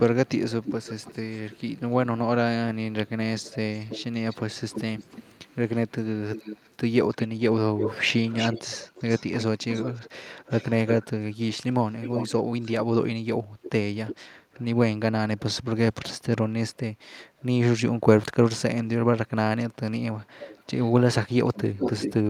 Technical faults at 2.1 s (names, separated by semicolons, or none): echo leak